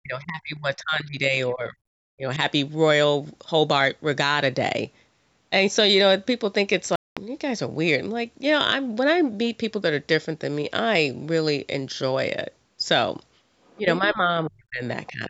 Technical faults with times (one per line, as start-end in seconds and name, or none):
0.00-1.82 speech suppressed in double talk
2.16-2.39 speech suppressed in double talk
6.96-7.17 Bluetooth dropout
13.65-13.78 other side's voice leaking through
13.79-14.84 speech suppressed in double talk
15.06-15.12 other side's voice leaking through
15.09-15.29 speech suppressed in double talk